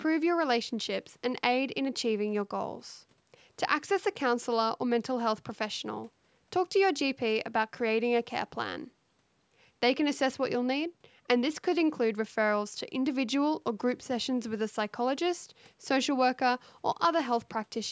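No technical faults can be heard in the speech; it has passed through ordinary call microphone processing, which trims the lowest bass and leaves nothing above 8 kHz.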